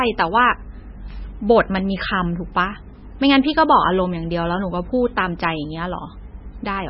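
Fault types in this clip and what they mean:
MP3 compression: speech has nothing above 5.6 kHz and a watery, swirling texture throughout, unlike a plain filter; likely heavy MP3 coding near 17 kbps.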